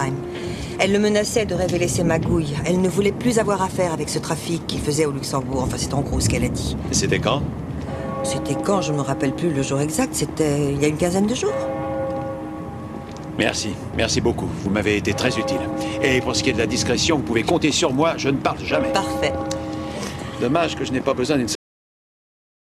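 At 21.55 s there's a cut-off end: the final buffers never got written, so the sound stops mid-stream and drops straight to digital silence, no decay at all.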